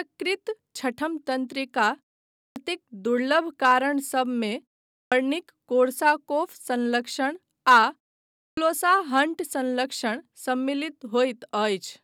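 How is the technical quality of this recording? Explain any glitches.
The recording has a recurring fault: clipped starts after a pause. At 2.38 s, 4.94 s and 8.42 s, speech resumes abruptly after pauses of 0.35 to 0.5 s. Each time, about 0.15 to 0.18 s of its beginning is missing. The output device sleeps during silence and wakes too late, so the first sounds vanish.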